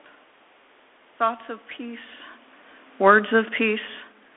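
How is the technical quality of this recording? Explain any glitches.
Technical quality is limited by a narrowband headset path with audible codec damage, plus a gain drop near the end.

Throughout, the speech carries Bluetooth CVSD headset codec damage. The one-bit delta coding, which fits a 64 kbps CVSD link, leaves granular hiss and scratchy sibilants. A spectrogram shows nothing above 3.8 kHz.

From 2.93 to 4.06 s, automatic gain falling lowers the level by about 5 dB. The control reacts to loud input, so speech and background sink together, and the waveform envelope tapers steadily.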